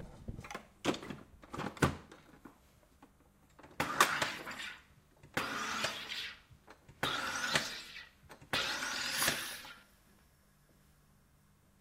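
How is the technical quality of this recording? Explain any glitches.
The technical quality of this recording is sound, with no glitches to explain.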